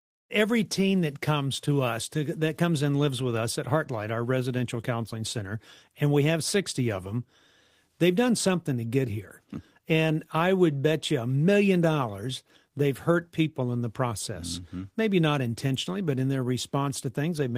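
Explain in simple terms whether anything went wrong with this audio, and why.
Nothing went wrong here; the speech comes across steady and natural, with no dropouts, glitches or odd sounds anywhere along the way.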